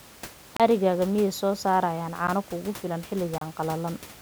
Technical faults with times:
0.57-0.60 block of digital silence
2.27 block of digital silence
3.38-3.41 block of digital silence

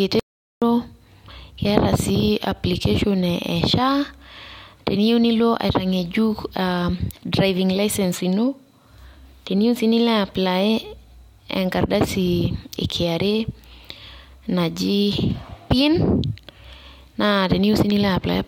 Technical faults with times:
0.20-0.62 audio dropout to silence

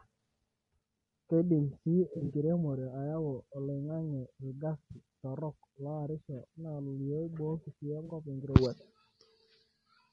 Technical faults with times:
0.00-10.13 low-delay AAC compression
2.13-2.32 AAC frame loss with concealment
4.91-4.98 AAC frame loss with concealment
8.05-8.12 AAC frame loss with concealment

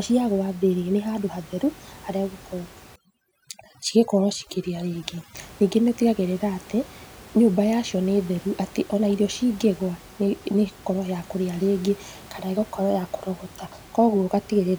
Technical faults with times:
2.96-5.35 overdone noise removal

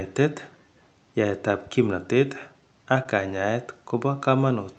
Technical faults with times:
3.03-3.07 short concealed packet loss

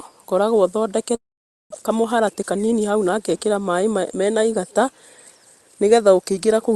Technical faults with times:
1.15-1.74 long network dropout
1.82-3.33 jitter buffer speed-up

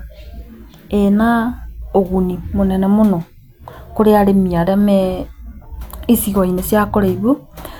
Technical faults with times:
none

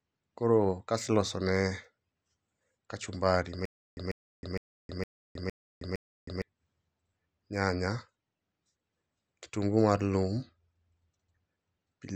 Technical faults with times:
3.65-6.42 stutter with silent gaps

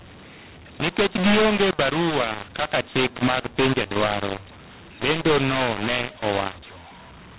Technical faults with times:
0.00-7.39 mu-law and A-law mixed up

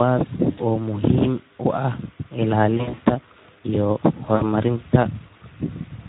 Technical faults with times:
0.00-6.08 Speex codec
0.51-0.60 VoIP packet loss concealed by the speech codec
2.77-2.99 VoIP packet loss concealed by the speech codec
4.35-4.42 VoIP packet loss concealed by the speech codec

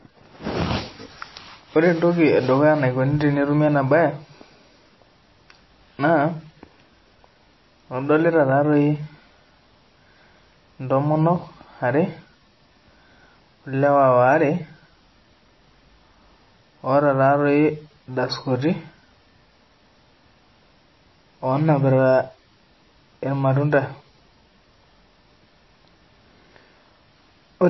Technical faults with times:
0.00-27.70 MP3 compression

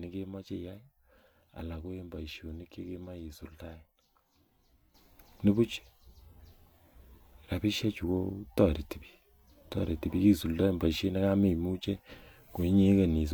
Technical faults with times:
4.94-13.34 sudden gain jump

